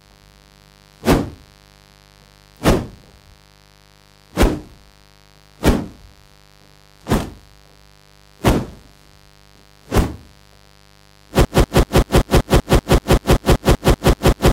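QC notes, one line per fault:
Throughout: mains buzz. A steady, raspy buzz sits under the sound at roughly 30 dB below it, built on 50 Hz mains. Sharp switching spikes, twice per mains cycle, leaked in from a dimmer, rectifier or poor shielding, and they carry harmonics of 50 Hz well up into the kilohertz range. That upper spread separates it from plain hum, which is a smooth, low 50 Hz tone without the gritty edge.
11.45 s to the end: broken-record loop. The same 0.19 s fragment repeats exactly, back to back, 16 times until the audio stops, and the material that belonged in those 3 seconds never arrives. The likely cause is a stalled player, encoder or stream that kept resending the last piece it held. Echo or reverb would decay and smear, and a stutter would break up at uneven spacing. These repeats are identical and evenly spaced, with no decay.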